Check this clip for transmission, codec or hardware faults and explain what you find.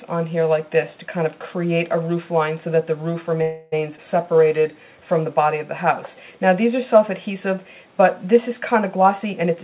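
Four faults are audible, clustered around 3.4 to 4.7 s, with one more at the end. The audio passed through a call path band-limited with nothing above 4 kHz, which fits a G.711 mu-law codec at 64 kbps.

From 3.42 to 3.74 s there is a call audio freeze. The last sound is carried on as a buzz or hiss that decays for about 300 ms, with no silence, and then the audio resumes where it left off. The likely cause is packets held up in transit, draining the jitter buffer so the receiver had to synthesise a continuation. Nothing is lost; a 300 ms gap is inserted and playback now runs 300 ms later.

At 3.96 to 3.99 s a skip ahead follows. Playback jumps forward, with a short joining piece of about 13 ms bridging the cut, and roughly 70 ms of audio is gone. This happens when a stretch of audio is dropped, in transit or by an overfilled jitter buffer, while later audio is already queued. The two sides of the cut are spliced almost directly, which also recovers roughly 70 ms of the earlier added delay.

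From 4.24 to 4.75 s there is a jitter buffer slow-down. Playback drops to 88% speed with the pitch unchanged, and 70 ms of material is added across that half-second. The receiver builds up its buffer reserve by repeating single pitch periods or fragments of pauses many times in succession. The result is stretched, drawn-out sound with no shift in pitch.

From 8.96 s to the end of the clip there is a jitter buffer speed-up. Playback runs at 117% speed with the pitch held, and roughly 150 ms is removed. Here the buffer held more than its target, so the receiver repeatedly cut out short segments of one or a few pitch periods to reduce the delay. At that rate the audio sounds noticeably hurried.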